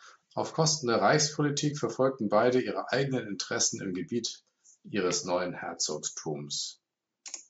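Nothing is technically wrong with this speech clip; it shows only the usual trace of call microphone processing, with the lowest bass trimmed and nothing above 8 kHz.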